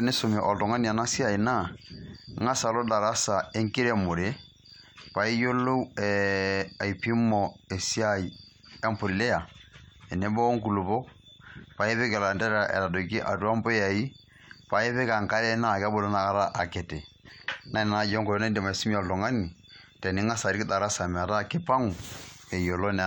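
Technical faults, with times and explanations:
Nothing faulty can be heard anywhere in the speech.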